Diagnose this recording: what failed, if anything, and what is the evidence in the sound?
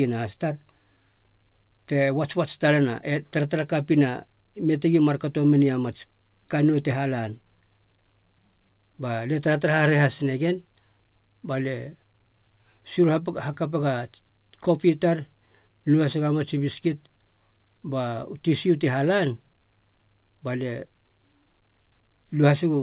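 Nothing in this speech recording points to a failure at any stage of the chain. The A-law G.711 telephone coding is audible as a band that stops short of 4 kHz, as 8 kHz sampling dictates, with a faint hiss that rises and falls with the level of the speech.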